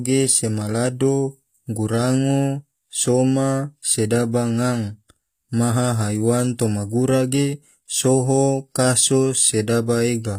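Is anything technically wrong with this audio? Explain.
Yes. Throughout, the treble sounds synthetic and gritty, with nothing above 15.5 kHz. This is likely HE-AAC compression at a low bitrate near 24 kbps, rebuilding the highs from copied lower bands.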